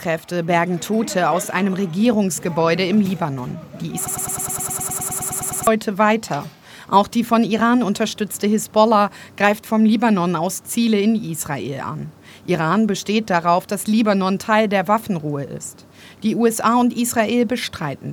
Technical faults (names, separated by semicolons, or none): broken-record loop